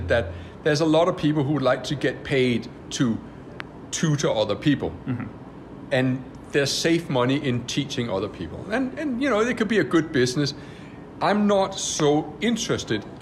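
Loud pops occur from 3.60 to 3.62 s and again from 12.00 to 12.02 s, each a single sharp crack standing about 15 dB above the surrounding sound, which continues beneath it. Each is likely a sudden voltage pulse from a plug, switch or static discharge.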